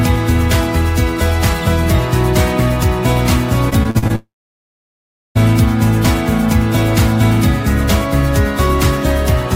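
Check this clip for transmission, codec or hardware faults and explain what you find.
Two transmission faults occur back to back, both from network loss.

From 3.69 to 4.11 s there is repeated packet loss (robotic sound). Six short gaps, the longest 39 ms, were each patched by extending the preceding sound, so about a third of this stretch is filled-in audio. The result is choppy, with real audio still between the patches, which sets it apart from a single long outage.

From 4.15 to 5.37 s the sound stretches into a brief fading buzz or hiss and then falls to silence for roughly 1.07 s, before resuming with about 1.2 s of audio missing. This is likely a long network dropout. Unlike the earlier stutter, the hole is continuous and empty rather than broken into small repeats.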